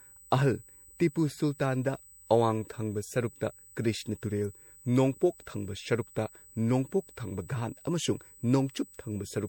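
From start to finish, a steady, thin whistle sits at 8 kHz. This is USB whine. The bus works in 125-microsecond microframes, and that rhythm has leaked into the audio through the power or ground. The result is a fixed-pitch tone that never moves. It runs about 25 dB below the speech.

Throughout the clip the speech also sounds swirly, smeared and hollow. Consonant attacks are blurred. Nothing is heard above 16.4 kHz. The damage is worse than a single low-bitrate pass would cause. It fits MP3 at around 64 kbit/s. The likely cause is generation loss: the audio was decoded and re-encoded several times. Each pass quantised on a shifted frame grid, so the artefacts stacked up.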